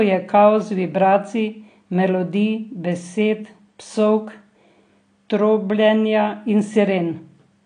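From start to finish the speech sounds dull and smeared, with nothing above about 9.8 kHz, and sibilants and held sounds take on a watery, warbling fizz. The codec damage is plainly audible throughout. It is likely AAC compression at a low bitrate, consistent with AAC-LC around 32 kbps. The encoder lowered its cut-off to save bits and quantised the remaining frequency bands coarsely, leaving gaps and smearing that show up on sustained and hissy sounds.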